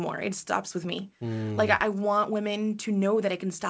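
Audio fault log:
No faults heard anywhere in this speech recording.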